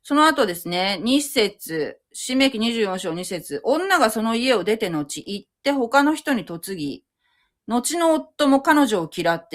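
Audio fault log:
No faults found in this speech recording; nothing to log.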